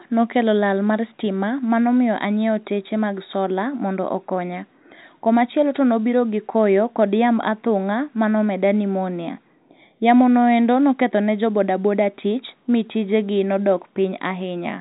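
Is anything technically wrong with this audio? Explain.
No, nothing's wrong here; it's speech carried over ordinary G.711 telephone coding, so the narrow phone-line band with nothing above 4 kHz is just how that format sounds.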